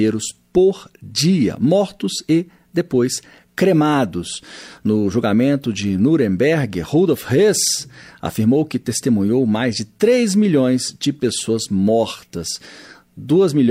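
Nothing in the recording stood out as a technical problem on listening.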